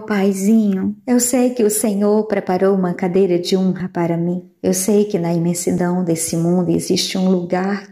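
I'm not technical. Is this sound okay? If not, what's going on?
No. Tiny clicks or skips occur at 1.81, 3.80 and 5.78 seconds. This is overlap between stream segments. Pieces sent every 2 seconds overlap, so a sliver gets cut.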